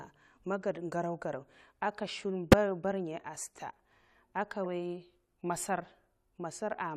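Speech with two corrupt frames decoded: just after "ged garo'garo aka shum", 2.52 to 2.54 s brings a fairly loud glitch, and 4.65 s has a much fainter one. Each time a single damaged frame got played anyway, throwing energy into the wrong frequencies.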